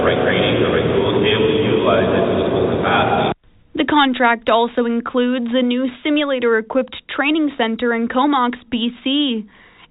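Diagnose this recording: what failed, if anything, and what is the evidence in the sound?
Nothing in the recording has failed: the audio came through a WebRTC call path using the G.711 mu-law codec at 64 kbps, so the absence of any content above 4 kHz and the codec's ordinary coding noise are simply what that telephone-band path produces.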